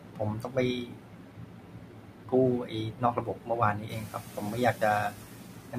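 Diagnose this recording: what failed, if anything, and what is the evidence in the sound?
Soft speech sounds swallowed, dipping by about 12 to 13 dB at 0.0–0.57, 0.81–2.33, 2.64–3.5, 3.74–4.82 and 5.1–5.77 s. Call processing failed: this is speech cut by the noise suppressor, which mistook quiet speech for background and attenuated it along with the room noise.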